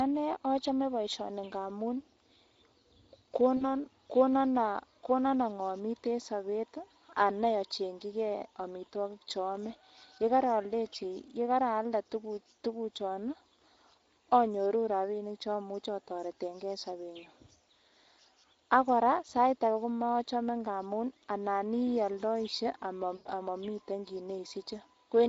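Throughout the speech, Speex codec damage is plainly audible. At a mid-range setting, which fits roughly 16 to 17 kbps, the CELP coder has too few bits to model the excitation well, so the speech sounds noisy and hoarse with a grainy edge. On a spectrogram the harmonics look smeared, with noise filling the gaps between them. Anything above 4 kHz shows as a diffuse shaded wash, without clear harmonic or consonant detail.

From 3.57 to 3.64 s comes the first VoIP packet loss concealed by the speech codec, which fits about 40 ms of lost audio. The decoder keeps repeating its last pitch and spectral envelope at falling gain, so the sound stretches into a short tail that fades. A spectrogram shows a flat, frozen spectral pattern, and the waveform envelope sags. The speech stays weak for a moment after the gap.

From 23.15 to 23.29 s a longer loss of the same kind, fitting about 100 ms, gives a more obvious extrapolated stretch. 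It fades as the decoder lowers its gain frame by frame. On the waveform this appears as a smooth stretch that shrinks in amplitude. Recovery afterwards takes tens of milliseconds, so the sound is weak or distorted just after the gap.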